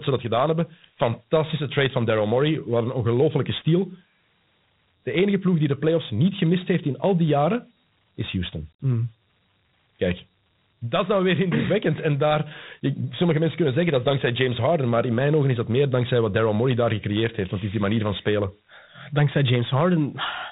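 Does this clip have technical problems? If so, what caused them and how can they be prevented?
Yes. Sample clock jitter runs through the whole speech clip. The converter's clock wobbles by a few microseconds. Each sample is taken a little early or late. On steep parts of the waveform that timing error becomes an amplitude error, roughly 25 dB below the signal. It is heard as a rough hiss that rides on loud, bright syllables and disappears in pauses. A stable, low-jitter clock for the converter prevents this.

Dialogic VOX ADPCM damage is also present from start to finish. This 4-bit adaptive coder stores only the step from one sample to the next. Its coarse steps leave a gritty hiss that follows the speech, and the damage is plainly audible. Nothing is heard above 3.8 kHz, so the top of the voice is missing. That fits an 8 kHz, 32 kbit/s stream. Keeping a wideband PCM or modern-codec copy avoids this.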